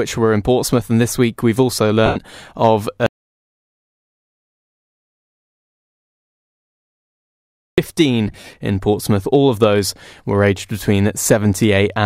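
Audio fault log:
2.06–2.16 s, lost LE Audio frames: about 98 ms of the Bluetooth LE Audio stream went missing, which fits roughly 13 frames of 7.5 ms. The LC3 decoder filled the gap by repeating the last good spectrum with randomised phase, so the speech turns into a brief hissy smear instead of clean harmonics. On a spectrogram the harmonic lines blur into a diffuse noise band of the same overall shape, and the waveform envelope flattens and softens.
3.06–7.78 s, audio dropout to silence: the sound cuts off abruptly and stays absent for about 4.7 s before returning mid-flow. The gap is silence with no room tone, which points to a likely broken input link or device disconnect while recording continued writing silence. Whatever was spoken in that span is lost. The waveform shows a flat line, and the spectrogram shows a solid black block with hard vertical edges at both ends.
8.28–8.54 s, lost LE Audio frames: about 143 ms of frames were lost, scattered across roughly 255 ms rather than in one block, with the longest continuous gap around 50 ms. 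Each hole is concealed by recycling the previous spectrum with random signs, so the speech flickers between clear and noisy smear. On a spectrogram several short smeared patches break up the harmonic structure, and the waveform shows irregular softened stretches between normal ones.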